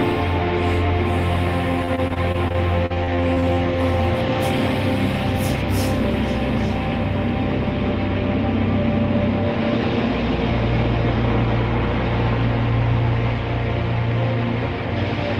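From 1.85 to 3.55 s, repeated packet loss (robotic sound) breaks the audio with about a dozen short holes, none longer than 38 ms. Each is patched by extending the preceding sound, concealing roughly 18% of the stretch and giving a choppy texture with pieces missing.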